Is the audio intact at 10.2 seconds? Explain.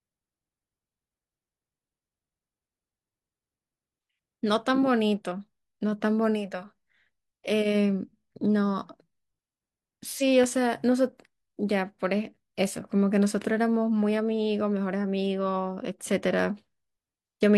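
No. Compressed frames are skipped at 10.17 to 10.22 s. A single compressed frame is missing or was rejected as damaged by the decoder, so playback jumps ahead by about 50 ms of speech, which fits a frame length of around 46 ms. A small piece of the speech drops out.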